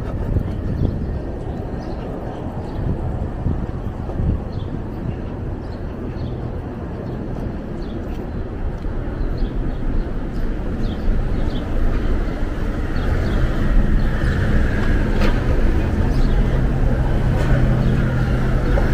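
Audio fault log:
1.14, 5.02, 11.31, 14.93 and 18.14 s: damaged data in a compressed stream. Corrupted bytes make the decoder misread frames and lose sync, producing brief 10 to 18 ms blips.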